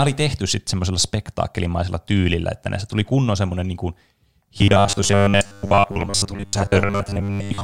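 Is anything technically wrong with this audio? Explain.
Yes. From 4.58 s to 7.63 s the speech turns into robotic sound from repeated short buffers, likely because audio arrived too seldom and about 10 ms segments were looped for most of that stretch. The result is a rigid 100 Hz metallic buzz, visible as evenly spaced harmonics on a spectrogram and a repeating waveform pattern.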